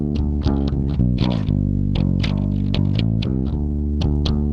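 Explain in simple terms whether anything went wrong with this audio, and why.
Nothing went wrong here.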